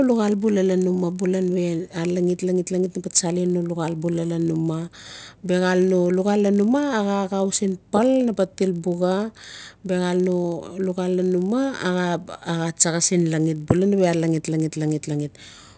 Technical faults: resampler restarted on every block

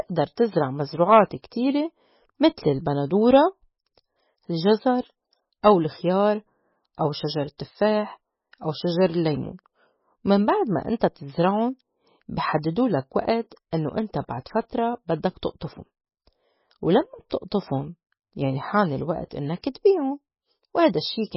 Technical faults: MP3 compression

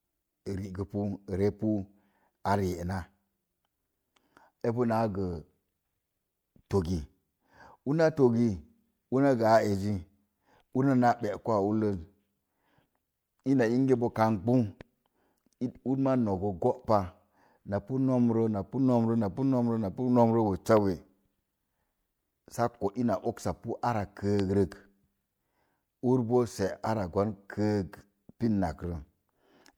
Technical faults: loud pop

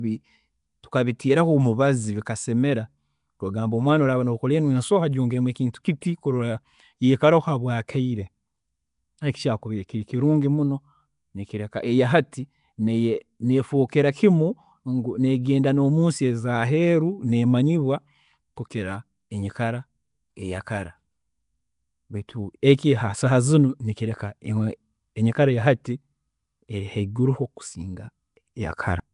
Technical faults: Nellymoser compression; pre-echo

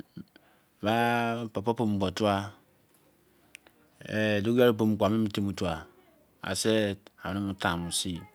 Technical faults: none

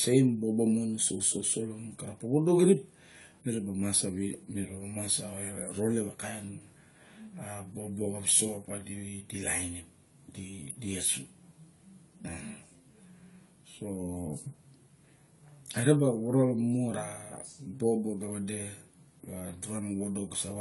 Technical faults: AAC compression

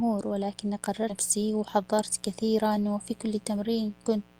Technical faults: mains buzz; skip ahead; jitter buffer speed-up

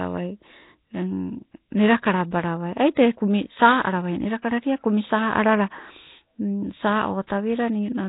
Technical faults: Nellymoser compression

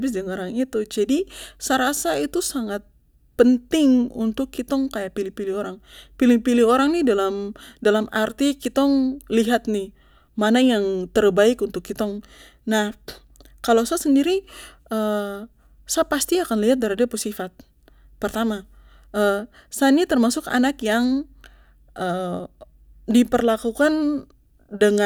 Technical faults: none

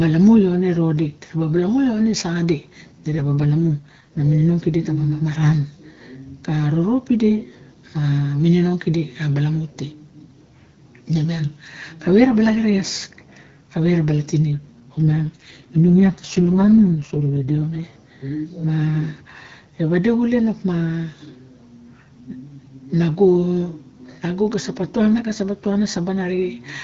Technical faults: AMR rate drop

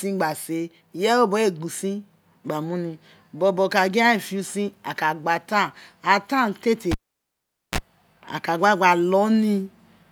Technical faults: cable pulled and plugged in

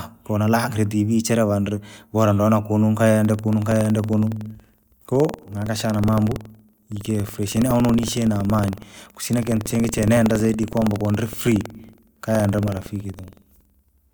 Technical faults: buffer tearing

